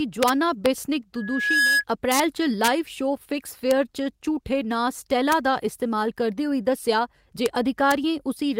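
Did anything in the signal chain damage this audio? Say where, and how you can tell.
Yes. Integer overflow at the sample-format conversion stage. Sharp cracks occur at 0.23–0.29, 0.66, 2.12–2.20, 2.64–2.68 (before "शो फिक्स"), 3.71, 5.32, 7.46 and 7.91 s. Peaks only 0–2 dB over the limit wrap to the opposite sign instead of clipping.

Loudspeaker feedback squeal in the analogue stage, through the acoustic path between microphone and loudspeaker. A 1.7 kHz tone swells over about half a second from 1.16 s, peaks about 5 dB above the speech, and stops at 1.84 s. At that frequency, the loop gain exceeded one.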